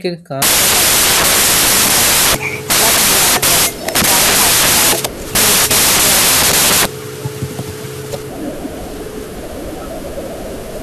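From 0.42 s to the end, wrong sample width: 16-bit speech read as packed 24-bit. Mismatched bytes give loud noise, the speech buried, 1.5 times too fast and high.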